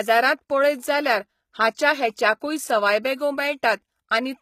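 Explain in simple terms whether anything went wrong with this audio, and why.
The speech was most likely squeezed with HE-AAC compression, which rebuilds the treble from lower sounds, so throughout, s sounds turn gritty and lispy, and nothing remains above 14.9 kHz.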